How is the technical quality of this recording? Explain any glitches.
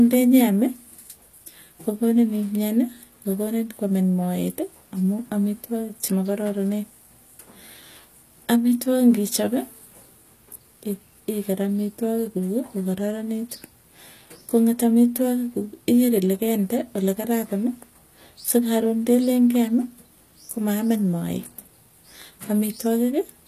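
The recording carries plainly audible codec damage throughout the speech, most likely HE-AAC compression at a low rate, consistent with something around 24 kbps. Only the lower spectrum is truly coded; the treble is rebuilt by copying lower bands upward under a coarse envelope, so its harmonics don't line up, and sibilants come out gritty and metallic or lispy. Unlike a simple low-pass or MP3 dulling, the top stays bright yet synthetic, with nothing above 15 kHz.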